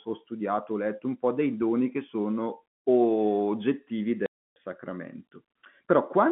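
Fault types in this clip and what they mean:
Packet loss filled with silence: right after "doni che sono oggettivi" the sound drops out completely from 4.26 to 4.56 s, a 300 ms hole with hard edges. The receiver missed a run of consecutive packets and just played silence instead of patching the gap, and a gap that long fits about ten packets of 30 ms each. The telephone band around it, roughly 150 Hz to 3.4 kHz, comes through cleanly.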